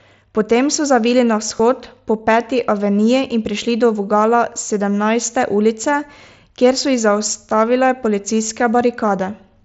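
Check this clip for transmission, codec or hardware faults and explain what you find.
One fault turns up: concealed Bluetooth headset packet loss at 1.57 to 1.60 s, just after "so zavili na". About 23 ms of headset audio went missing, which fits three lost frames. The receiver bridged the gap by repeating the closest-matching recent stretch of waveform, so it shows up only as a brief buzzy hold and a slight warble when real audio resumes. The mSBC headset codec is also audible, with a band limited to 8 kHz and light graininess.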